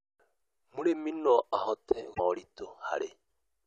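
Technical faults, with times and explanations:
2.10–2.20 s, damaged data in a compressed stream: right after "no ahote", a stretch of the compressed speech stream arrived corrupted, with bytes lost or overwritten, so the decoder could not read those frames correctly. It lost sync and had to hunt forward for the next valid frame header before resuming. For about a tenth of a second the sound breaks up, and then the speech picks up again.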